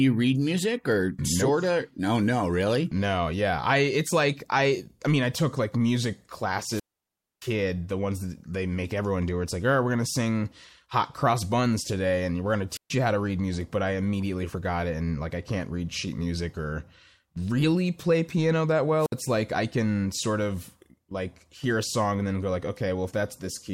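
At 6.62–7.53 s, 12.70–12.91 s and 18.97–19.15 s, wireless microphone squelch dropouts occur: the receiver's radio signal fades, hiss rises, then squelch mutes the speech for about 0.62, 0.13 and 0.06 s. The waveform shows flat gaps, and the spectrogram shows brief broadband noise before blank columns.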